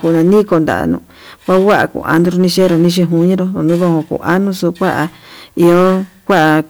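From start to end, the speech is pushed into hard clipping: some stage in the chain is being driven about 8 dB beyond what it can pass, so every waveform peak that exceeds the limit is sliced flat. Only a small share of the samples, roughly one in twenty-five, hit that ceiling, but the squared-off tops throw energy into high harmonics, giving a gritty crackle that rides on the peaks throughout the clip.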